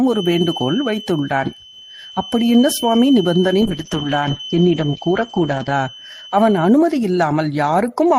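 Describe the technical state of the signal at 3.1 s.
A feedback whistle is present at 3.1 s, within a span running from 0.0 to 6.79 s. A loudspeaker-to-microphone loop is likely poised just at the point of feedback, sustaining a thin, steady 3 kHz tone roughly 15 dB beneath the speech that swells and fades slowly in level.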